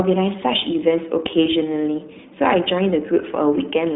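From start to finish the speech passes through the iLBC codec, a narrowband VoIP coder. The line carries roughly 150 Hz to 3.7 kHz, and nothing is heard above 3.8 kHz. The sound is muffled and thin. Each 20 ms frame's excitation is coded on its own, without help from the frame before. At a rate consistent with 15.2 kbps, that leaves plainly audible damage. The speech stays clear but sounds rough and synthetic.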